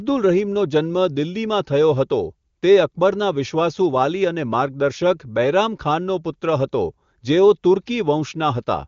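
Nothing stood out on listening to this speech, which has the band-limited sound of an AMR wideband (HD Voice) call with nothing above about 7.4 kHz.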